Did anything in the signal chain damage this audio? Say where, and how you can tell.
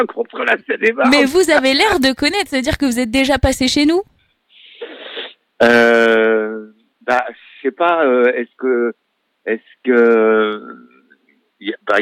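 No, nothing in the chain damaged it.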